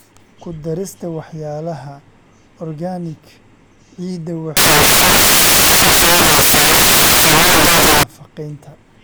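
A speech clip in which, from 4.57 to 8.03 s, the samples are built from the wrong bytes: misassembled values turn the fast-changing low bits into the large part, giving loud, harsh broadband noise. Unlike added hiss, it replaces the sound outright.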